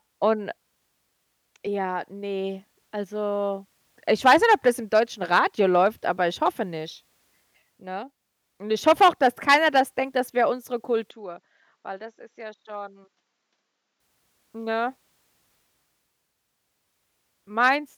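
Speech clip, and right after "denkt das wäre unsere" at 11.1 s it turns duller and about 10 dB quieter, with nothing above 7.6 kHz and a faint new noise floor until 14.0 s, likely the input switching to a poorer device.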